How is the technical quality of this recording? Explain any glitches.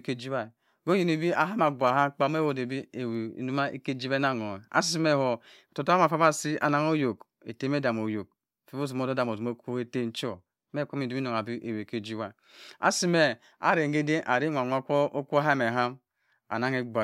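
No glitches: nothing in the speech recording registers as a technical fault at any point.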